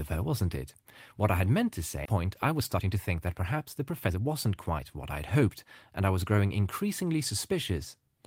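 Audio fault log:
2.05–2.07 s, skip ahead: right after "I had meant to", roughly a second of speech is discarded and the later audio is butted straight on with no fill. On a waveform the envelope jumps abruptly; a spectrogram shows formant tracks breaking without a gap.
2.17–6.45 s, jitter buffer speed-up: the receiver trims pitch-period-sized slices repeatedly to drain excess buffered delay, about half a second in total, so speech runs at 112% speed with pitch unchanged. A spectrogram shows compressed syllable timing but unshifted harmonics.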